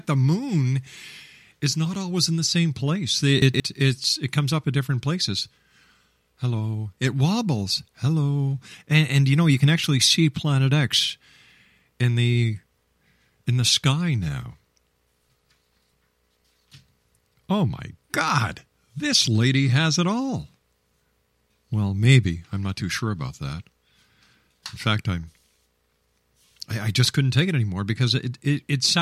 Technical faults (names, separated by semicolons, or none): chunks out of order